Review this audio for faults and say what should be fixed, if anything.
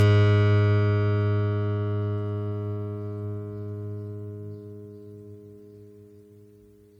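Generation loss runs through the whole music clip: the sound is swirly, hollow and smeared, with softened attacks, most likely from roughly seven passes through an MP3 encoder at about 96 kbit/s, each requantising on a shifted frame grid. A spectrogram shows ragged, flickering holes and a dulled top end. Keep a lossless master and encode to MP3 only once, at the final step.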